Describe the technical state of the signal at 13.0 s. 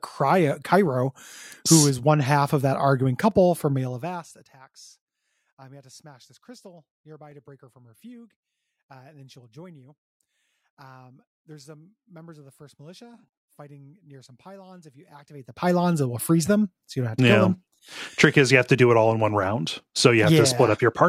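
At 13.0 s you're inside a run of periodic USB or driver dropouts, 1.32 to 19.29 s: every 2 s a couple of milliseconds drop to silence, ticking through the speech.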